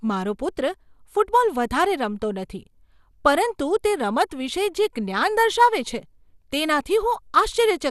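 MP2 compression throughout: the speech is dull with gurgling, granular distortion and nothing above 12.2 kHz, likely from too few bits, fitting roughly 80 kbps, switching upper sub-bands off.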